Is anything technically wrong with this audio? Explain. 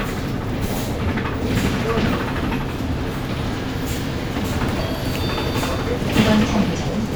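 Yes. From 0.22 s to 6.82 s there is a regular click, about every 0.6 s, roughly ten in all. These are clock drift buffer slips. The likely cause is two devices running on separate clocks that disagree by something around 300 ppm. The buffer between them slowly drifts until a small block of only a few samples is dropped or repeated. Each slip breaks the waveform briefly, so the clicks land at an even, mechanical pace over the sound.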